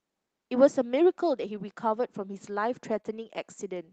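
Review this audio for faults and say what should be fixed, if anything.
Two stretches are lost packets rebuilt from error correction, at 1.55 to 1.61 s and 2.93 to 2.99 s. Each covers about 40 ms, which points to two separate lost packets. The next packets carried low-bitrate copies, so nothing drops out. The rebuilt speech sounds rougher and noisier. Stronger forward error correction or a less lossy network link would reduce how often these copies are needed.

There is a short concealed packet loss at 3.01 to 3.05 s, right after the second rebuilt stretch. About 20 ms never arrived in time. The receiver extended the preceding speech to cover the hole and then blended back in. It is heard as a brief smear or wobble. A slightly deeper jitter buffer, or fixing the packet loss on the network path, would prevent it.

The Opus call path carries the speech up to 8 kHz, which fits a wideband setting near 40 kbps.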